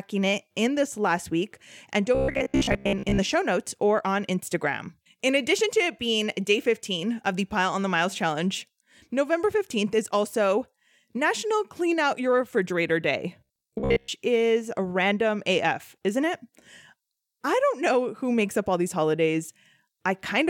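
Speech turns into a rigid metallic buzz near 66.7 Hz from 2.15 to 3.20 s and 13.41 to 14.10 s, robotic sound likely from repeated 15 ms buffers replacing most of the audio.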